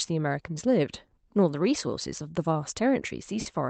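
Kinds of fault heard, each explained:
Clock drift between sender and receiver: The sending device's audio clock runs roughly 4% slow relative to the receiver's, so audio arrives a little more slowly than it is played out and the jitter buffer keeps draining. The receiver has to keep stretching the sound to avoid running dry. Throughout the speech this gives a faintly dragging, uneven pace rather than one obvious glitch.
Repeated timing corrections: Because of that slow sender clock, the receiver keeps inserting small stretches of repeated or extended material, always lengthening and never cutting, from about 0.12 s to 3.33 s. Playback runs at about 96% speed over that span, adding something like 150 ms overall. The edits are small and unevenly spaced, so they come across as slight hiccups and a wobbly, slightly slowed tempo in the speech.
Short stall from a late packet: Near the end, one packet fails to arrive on time and the jitter buffer briefly empties. 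From 3.41 s to 3.48 s the receiver holds the last sound for 50 ms until the packet turns up, then resumes from the same point, so nothing is lost. It is heard as a brief drawn-out sustain with a faint buzzy or dipping quality, through the Opus call path whose band tops out at 8 kHz.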